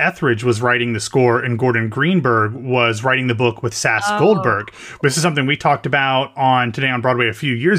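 Speech, with nothing technically wrong to report.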